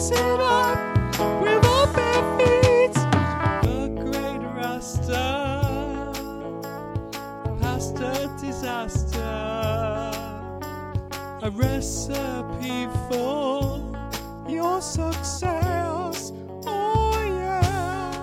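From 0.0 to 3.65 s the sound is duller, with nothing above 13 kHz. Its level differs by a few decibels, and a background noise sits well below it. At 3.65 s it clears abruptly, without a gap. This is likely an input switched to a poorer device.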